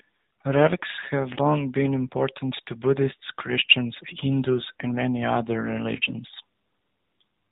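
Throughout, the speech carries AMR narrowband mobile codec damage. Nothing above 4 kHz survives. The voice sounds buzzy and synthetic, which fits a low bitrate near 7.4 kbps.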